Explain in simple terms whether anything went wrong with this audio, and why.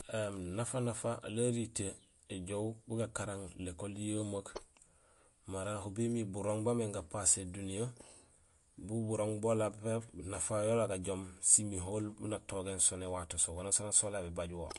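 Yes: throughout, the speech sounds watery and dull, with nothing above about 11.2 kHz. That's likely MP3 compression squeezed too hard, discarding treble and fine detail.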